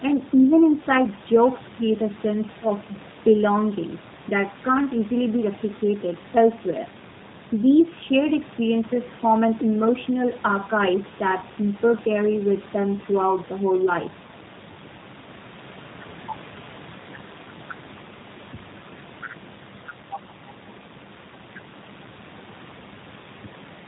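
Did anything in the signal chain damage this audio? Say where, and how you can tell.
Yes. The speech sounds band-limited, slightly rough and synthetic throughout, with nothing above 4 kHz. The room noise sits about 23 dB below the speech and warbles. This points to the codec stage: G.729 at around 8 kbit/s, which rebuilds speech from a vocal-tract filter, pitch predictor and sparse pulses.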